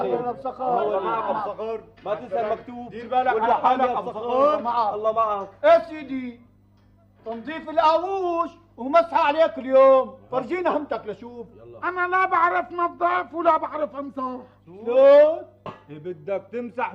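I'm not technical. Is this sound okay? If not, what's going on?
Yes, nothing wrong here.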